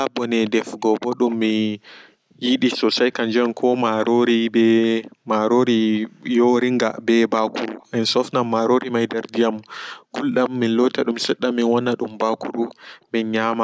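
Speech with echo leak: a faint copy of the voice, well below the direct sound, trails about 300 ms behind at 0.21–1.36, 3.44–3.49, 7.8–7.86, 9.08–9.66, 11.21–11.28 and 12.68–12.87 s, likely loudspeaker pickup at the far end that its echo canceller failed to remove.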